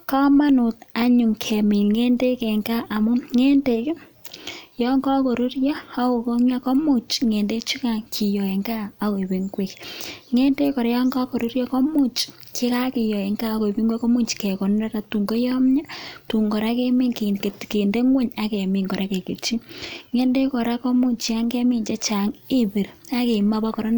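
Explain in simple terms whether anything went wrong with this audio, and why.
Nothing went wrong here: the speech signal stays steady and intact throughout, with no technical faults to be heard at any point.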